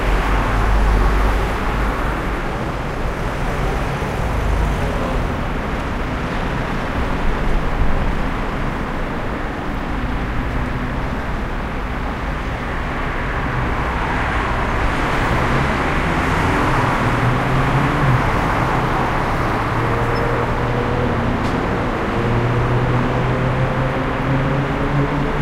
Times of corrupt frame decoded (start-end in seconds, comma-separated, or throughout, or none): 6.84-6.88